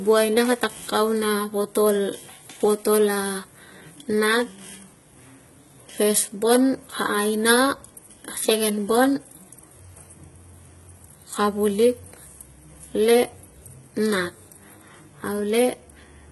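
A speech recording with HE-AAC compression damage from start to finish. The treble sounds bright but synthetic, and s sounds turn gritty and metallic. Nothing remains above 11.8 kHz. The heavy damage likely comes from spectral band replication at a very low bitrate, around 16 kbps.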